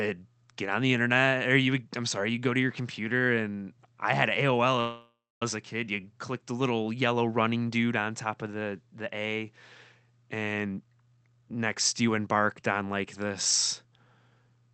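At 4.80 s the speech stops moving forward and the last sound is stretched into a buzzy, fading tail that drops to silence for about a quarter of a second before the speech resumes at 5.43 s, exactly where it left off. This is a call audio freeze, likely caused by packets held up in transit so the jitter buffer ran dry. The receiver filled the roughly 0.61 s wait with continued sound rather than skipping anything, so nothing is lost but everything after it now arrives that much later.

From 10.54 s to 13.05 s the talker sounds hurried and clipped, running at about 124% speed while the pitch stays where it was. This is a jitter buffer speed-up: the buffer was holding more audio than it wanted, so the receiver cut out many short slices, each a pitch period or a few long, to shed the extra delay. Roughly 0.7 s of audio disappears across the stretch. Through the call path the speech stays band-limited at 8 kHz, as the Opus link carries it.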